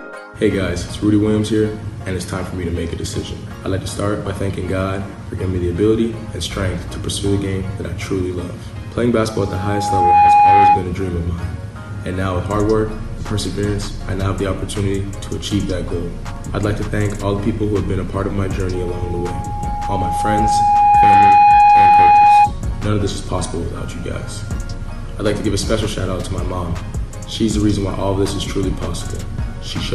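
Loudspeaker feedback squeal occurs at 9.36 to 10.86 s and again at 18.74 to 22.53 s. The microphone picks up its own loudspeaker, and an 826 Hz tone builds to about 10 dB above the sound, in under a second the first time and over roughly two seconds the second.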